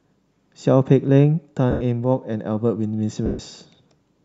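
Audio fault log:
1.71–1.81 s and 3.26–3.39 s, lost LE Audio frames: the speech smears into noise for 100 ms and 130 ms as the LC3 decoder repeats its last spectrum with random signs, then fades it.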